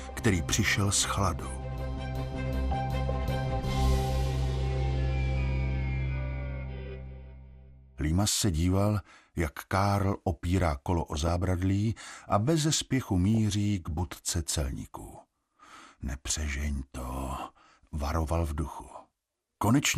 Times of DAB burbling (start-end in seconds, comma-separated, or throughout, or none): 11.08-11.28, 13.35-13.37, 18.88-18.94